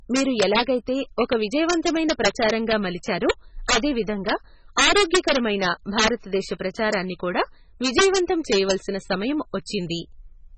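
A gain or summing stage in the signal path overflowed on this speech recording: when the level ran about 11 dB beyond the largest integer it could hold, the value wrapped to the opposite sign instead of being limited. Only a small fraction of samples, under one percent, crossed that limit, but each one flipped across the full range. The result is integer overflow heard throughout the clip as sharp cracks on the loudest peaks, more abrupt than ordinary clipping. The clip was also likely passed through MP3 compression at a very low rate, one that fits roughly 16 kbps. Nothing remains above about 8.3 kHz, so the top of the sound is cut off. The codec damage is heavy. Weak frequency components drop in and out from frame to frame, giving a watery, swirling texture with metallic chirps on s sounds and smeared attacks.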